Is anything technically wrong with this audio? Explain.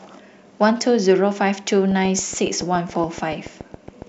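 Yes, there is a train of clicks from 1.91 s to 4.03 s. Likely interference or a faulty connection injects a pulse about 7.1 times per second at regular spacing, giving some fifteen similar clicks, peaking about 5 dB above the speech and ticking through the pauses too.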